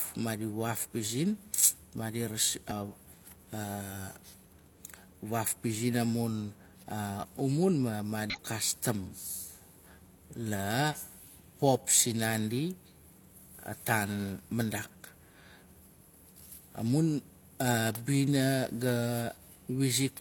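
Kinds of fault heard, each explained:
Damaged data in a compressed stream: bytes in the compressed speech were corrupted, so the decoder misread those frames and lost sync while hunting for the next valid frame header. That produces two short garbled blips, at 2.67 to 2.73 s and 8.30 to 8.36 s, each lasting about 60 ms.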